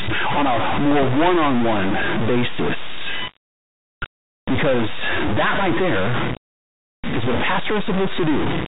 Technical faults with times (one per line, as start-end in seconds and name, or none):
0.00-8.67 stuck bit
5.69-5.71 loud pop